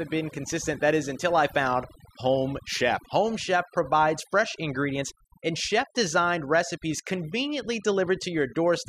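Speech running the full clip with overdone noise removal throughout: an over-aggressive noise reducer drives frequency bands near its noise estimate almost to nothing, leaving near-silent gaps speckled with twinkling artefacts. A noise gate differs: it mutes everything at once, without those shimmering specks.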